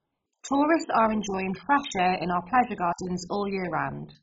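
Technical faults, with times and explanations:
Throughout, MP2 compression: The speech sounds dull and gurgling, with a coarse, granular roughness. Nothing is heard above about 7.5 kHz. The upper sub-bands appear to be switched off entirely, while those that remain flicker and are quantised crudely. This is likely heavy MPEG Layer II coding with too few bits to share among its 32 bands. The damage fits a very low bitrate, around 16 kbps.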